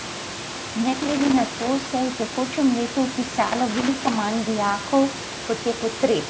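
Overdone noise removal runs through the whole speech clip: an over-aggressive reduction stage gates individual frequency bands down whenever they sit near its noise estimate, so the room noise, about 14 dB below the voice, collapses into near silence with twinkling specks. The spectrogram shows isolated dots in the gaps and ragged, holed harmonics.

From 0.93 to 1.87 s and again from 3.43 to 4.16 s there is loose connector crackle. A worn contact makes and breaks rapidly, chopping the signal and adding irregular scratchy bursts. The waveform shows dense clusters of sharp spikes and dropouts, and the spectrogram shows vertical broadband streaks reaching up to the 8 kHz ceiling of the call microphone processing.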